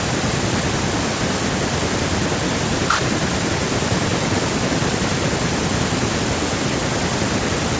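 Speech through a call's microphone processing, band-limited to 8 kHz with the lowest bass rolled off as that processing normally does, and room noise sitting about 37 dB below the speech, with no technical faults present.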